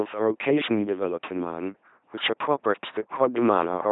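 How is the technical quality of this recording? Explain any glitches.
Poor: the speech is heavily degraded from start to finish by one fault, an LPC-10 vocoder.

Throughout, the speech has a buzzy, mechanical, robotic quality, with harsh buzz or hiss where the voiced and unvoiced sounds get confused, and nothing above about 3.8 kHz. The vocoder discards the original waveform and rebuilds each moment from a ten-pole vocal tract filter fed by either a pulse train or noise. The heavy damage points to a very low rate, consistent with about 2.4 kbit/s.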